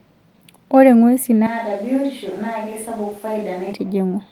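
From 1.47 to 3.73 s the speech abruptly turns hollow, roomy and thin, about 10 dB quieter with more noise, likely a switch to a distant microphone; unlike added reverb, it starts and stops suddenly.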